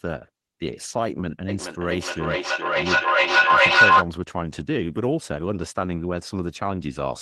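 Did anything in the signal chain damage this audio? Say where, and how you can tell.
Yes. The damage comes from feedback echo between two devices, at the call-processing stage. From 1.49 s to 4.09 s each sound returns at a steady interval of roughly 0.4 s. Each return is thinner and more ringing. The repeats build up rather than fade, peaking about 11 dB louder than the speech. A second device in the room is replaying this call. Its sound reaches the first microphone again, and neither echo canceller removes the other device's output.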